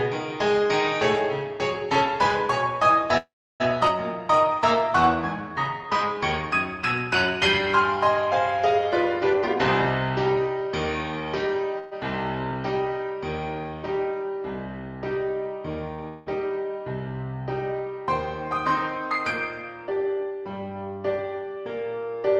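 At 3.17 s there's a call audio freeze: the last sound hangs on as a fading buzz and then about 320 ms of silence until 3.62 s. That's likely packets held up until the jitter buffer ran dry. It picks up where it left off, so nothing's missing, just a gap of about 424 ms.

Right after, at 3.88 s, comes a skip ahead. Roughly 150 ms of audio gets dropped, and the two sides are stitched together almost directly, so it audibly jumps forward.

From 4.13 to 6.20 s the jitter buffer slow-down kicks in. Repeated pitch periods stretch things to 93% speed, adding 150 ms, so the sound drags a little at the same pitch.

Then from 9.33 to 11.74 s there's a jitter buffer speed-up, running at 113%. Short pieces are trimmed out, roughly 300 ms in total, and it sounds noticeably hurried.

Straight after, a second call audio freeze at 11.79 s holds the last sound as a buzz for 128 ms, with no silence. Again, likely delayed packets, and nothing is lost.

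At 15.94 s a short stall from a late packet stretches the sound for about 39 ms, which comes across as a brief held buzz before it carries on.

Finally, at 16.08 s a long network dropout sets in. The last sound is carried as a buzz to 16.28 s, and about 180 ms of audio is gone for good when it resumes further on. The likely cause is packets that never arrived.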